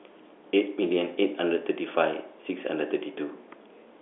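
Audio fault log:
No fault to log for this audio.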